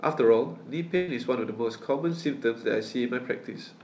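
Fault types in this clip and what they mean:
burst of packet loss: From 0.96 to 1.10 s the speech smears into a held, fading stretch with no silence, then picks up about 120 ms further on. Consecutive packets were lost or arrived late, so the receiver stretched the last sound across the gap.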